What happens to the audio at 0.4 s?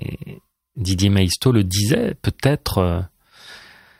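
At 0.4 s you're in a run of clock drift buffer slips from 0.12 to 3.13 s: a tick about every second, likely from two clocks drifting apart by roughly 150 ppm and forcing a few-sample block to be dropped or repeated.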